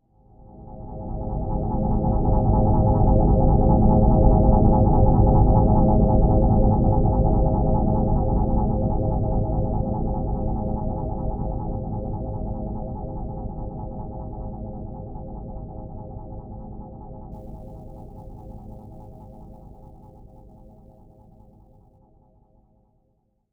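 Sample clock jitter runs from 17.32 to 21.99 s: the converter's timing wanders by around 10 microseconds, so samples land early or late. Steep, bright parts of the sound pick up a grainy hiss, roughly 35 dB below the signal.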